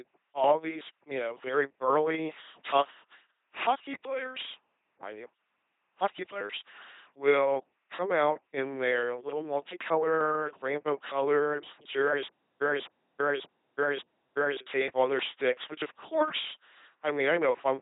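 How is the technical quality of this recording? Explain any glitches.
Pretty rough, honestly: the whole thing is heavily vocoded, and there's a stutter near the end.

The LPC-10 vocoder runs throughout at 2.4 kbit/s. Each moment gets modelled as either a buzz source or a hiss source pushed through a small vocal tract filter, so the speech comes out robotic and buzzy, with nothing above 3.8 kHz.

The stutter with silent gaps runs from 12.27 to 14.61 s, right after "little multicolored rainbow colored" and before "tape on their sticks". A 254 ms fragment plays four times, every 584 ms, with about 330 ms of dead digital silence between repeats. The likely cause is a stalled stream replaying its last buffer, so the audio in that stretch is gone.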